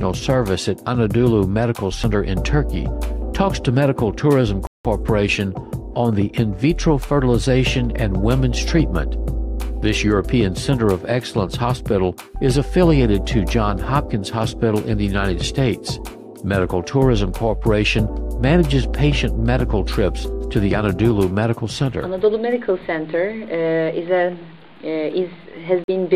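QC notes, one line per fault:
4.67 to 4.86 s and 25.84 to 25.90 s, Bluetooth stall: the audio cuts to silence for 178 ms and then 44 ms before carrying on. The likely cause is interference holding up wireless packets, so the headphones' buffer ran dry and playback paused until resent data arrived.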